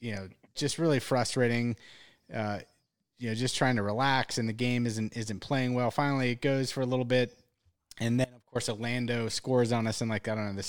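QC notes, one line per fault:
8.25 to 8.55 s, audio dropout to a faint residue: the speech cuts out abruptly for about 0.3 s and then snaps back mid-flow. It doesn't go dead silent, though; you can still hear a faint trace of the signal sitting somewhere around 25 dB down through the gap. That's likely the wanted feed getting lost briefly while the path downstream stayed live and kept leaking a little through. The hard edges are what make it sound like a break and not a natural pause.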